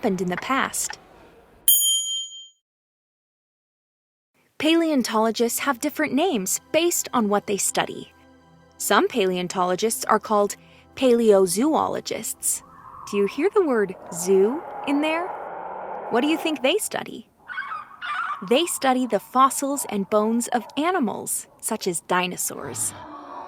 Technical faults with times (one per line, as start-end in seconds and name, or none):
none